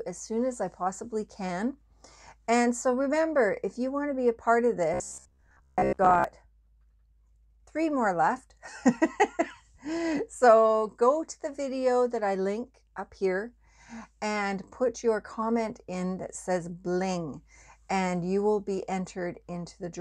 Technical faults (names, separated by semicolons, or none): robotic sound from repeated short buffers